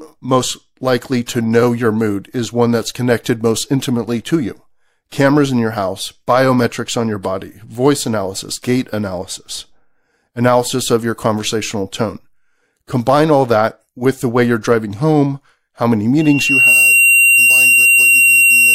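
At 16.20 s, just after "driving home how many", a loudspeaker feedback squeal starts and carries on to the end of the clip at 18.75 s. The microphone is hearing the loudspeaker it feeds, and at 2.8 kHz the loop gain has gone past one. Over roughly half a second that tone swells into a piercing whistle that ends up about 5 dB above the speech. A spectrogram shows one bright horizontal line at 2.8 kHz, and the waveform's envelope swells with it.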